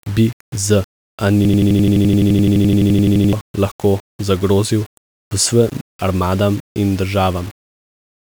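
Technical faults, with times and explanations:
Throughout: low bit depth without dither. Quiet speech turns gritty, with distortion tracking the signal, likely from rounding to about 6 bits without dither.
1.45 to 3.33 s: system hang loop. One 85.33 ms slice repeats 22 times, a machine-gun stutter at 11.7 Hz, which fits a 4096-sample buffer. About two seconds are lost before "lahko zagrozil".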